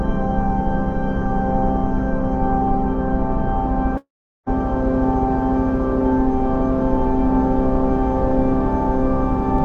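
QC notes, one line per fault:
3.97–4.51 s, long network dropout: the stream most likely stopped delivering audio here, and about 500 ms of the sound never reached playback. The receiver bridged the gap by carrying the last sound forward as a short buzzy tail that fades out, leaving about 400 ms of near silence. The sound resumes at 4.51 s further along than where it broke off, with the lost stretch simply missing.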